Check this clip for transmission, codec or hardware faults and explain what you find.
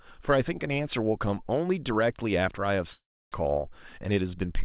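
Two faults stand out in the speech, both from the network side. Everything sits below 4 kHz, which fits the narrowband G.711 A-law call path.

From 2.92 to 3.36 s there is a long network dropout, likely caused by about 400 ms of audio never arriving. The receiver first stretches the last sound into a fading buzz, and the fill gives way to roughly 0.31 s of silence before speech resumes with that stretch missing. The decaying fill followed by dead silence sets it apart from a short packet-loss glitch, which is concealed smoothly within a few tens of milliseconds.

From 3.98 to 4.33 s a jitter buffer speed-up runs the speech at about 110% of normal rate. The receiver had built up extra buffered audio and trimmed it by repeatedly cutting out short pitch-period pieces, removing about 40 ms in total. The passage sounds hurried, but the pitch holds steady. That distinguishes it from a sample-rate or clock mismatch, where speeding up would also raise the pitch.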